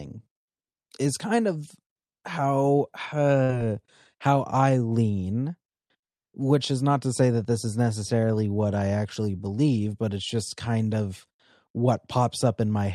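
At 3.43 s, right after "is kind of how", the sound freezes into a brief held sound that fades, then jumps ahead to 3.59 s. This is a burst of packet loss: the receiver stretched the last audio through the gap, and about 60 ms of speech never arrived.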